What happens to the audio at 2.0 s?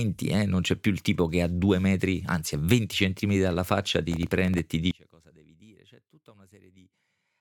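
Nothing goes wrong at 2.0 s; the speech carries on intact through that moment, with no dropout, click or distortion to be heard.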